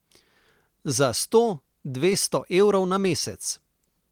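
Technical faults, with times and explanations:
2.10 s and 3.02–3.04 s, short concealed packet loss: both times about 10 ms of the speech arrived too late to decode, so the receiver extended the preceding sound for 5 ms and then 10 ms and blended back into the real signal, leaving a brief smear or wobble.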